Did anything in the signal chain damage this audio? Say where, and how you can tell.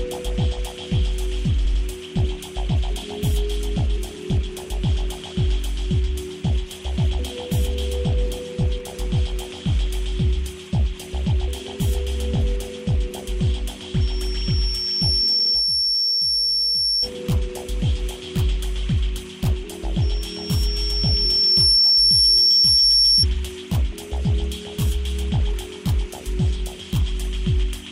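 Yes. Two kinds of damage are audible, at different stages.

Repeated frames point to the codec, storage or network stage. At 1.64 to 1.81 s an 85.3 ms block plays twice more, adding 170.7 ms. At 15.38 to 15.51 s a 64.0 ms block also plays twice more, adding 128 ms. The second one falls inside the first squeal. Compressed frames were written or delivered again, so the decoder replays identical material. That sets it apart from a dropout or packet loss: the same content comes back instead of a gap or a smoothed-over hole, and the clip gets longer.

Loudspeaker feedback squeal happens on the acoustic path, before capture: a microphone hears a loudspeaker it feeds, and the loop gain passes one at a single frequency. Here that frequency is 5.4 kHz. It appears from 14.00 to 17.09 s, rising to about 5 dB above the signal, and again from 20.01 to 23.26 s, reaching about 10 dB. Each time it builds over roughly a second and a half. 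That gradual self-sustaining growth separates it from a fixed electrical whistle or interference tone, which would appear at full strength at once.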